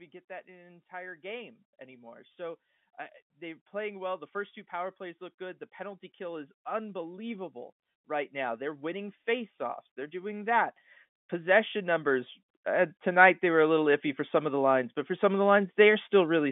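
The automatic gain control judged the input too quiet and kept pushing its gain up, three times in a row: by about 4 dB from 0.45 to 2.66 s, about 12 dB from 3.39 to 10.71 s, and about 9 dB from 11.44 to 16.23 s. Each time the speech and the background noise swell together, most obviously in the long middle climb, with the narrow telephone band staying the same throughout.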